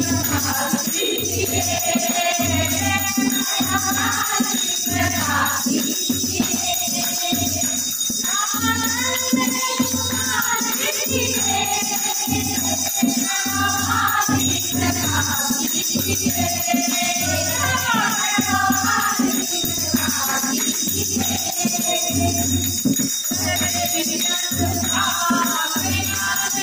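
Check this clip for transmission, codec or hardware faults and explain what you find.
There's one fault, and it runs the whole way through: a doubled audio track. A second full-band copy of the sound trails the original by around 150 ms, sitting about 5 dB lower, so every onset gets a crisp, flat slapback with no decay or room tail. The likely cause is the signal being picked up twice, once through a slower path, or an edit that left two copies stacked out of alignment.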